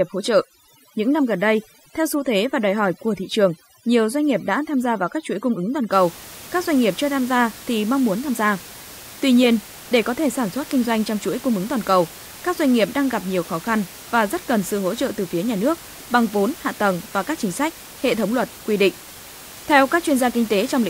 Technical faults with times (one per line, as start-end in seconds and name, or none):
0.00-5.92 overdone noise removal